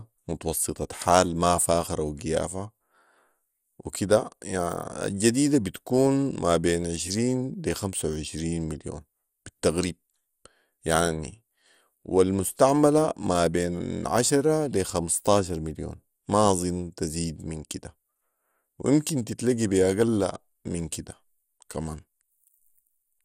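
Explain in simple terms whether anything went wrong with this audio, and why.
Yes, something went wrong. The speech sounds dull and gurgly from start to finish, with a grainy, bubbling edge, and nothing remains above about 16.6 kHz. This is most likely MP2 compression, the older format used on digital radio, squeezed hard enough that the damage is plainly audible. A simple treble cut would only sound muffled. This adds a fizzy, churning roughness, because the top slices of the sound keep switching on and off.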